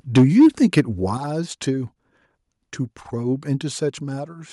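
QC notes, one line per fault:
0.16–0.8 s, microphone overload: peaks flattened about 7 dB past the limit on around a tenth of samples, giving a harsh crackle that gain drops don't add, likely from input set too high.
0.18 s, 1.17 s, 3.9 s, microphone volume stepped down: clean sudden level drops of about 3, 7 and 2 dB across sound and background, likely automatic input gain cuts, with no crackle.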